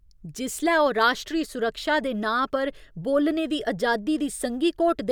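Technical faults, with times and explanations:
No technical faults turn up anywhere in this speech recording, and the signal holds steady with no audible disturbance from beginning to end.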